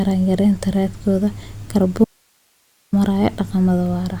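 At 2.04 s the speech cuts out abruptly. This is an audio dropout to a faint residue. For about 0.88 s, until 2.93 s, only hiss remains, roughly 45 dB below the speech level. The speech returns just as suddenly. The hard edges set it apart from a natural pause or a fade. The likely cause is a brief loss of the wanted signal while the path after the break stayed live and passed its own noise.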